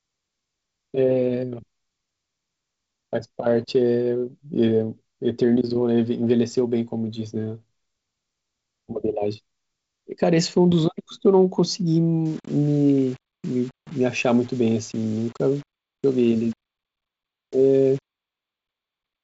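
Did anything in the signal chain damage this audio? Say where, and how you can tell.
Yes. From 12.26 s to the end, the speech turns grainy, with distortion that tracks the signal and sits around 30 dB below it, harshest in quieter passages. That points to low bit depth without dither, likely from a sample-format conversion that rounded the samples to about 7 bits. With no dither, the rounding error is correlated with the waveform, so it sounds like grit riding on the speech rather than a steady hiss. The G.722 wideband band limit near 7.7 kHz is audible throughout.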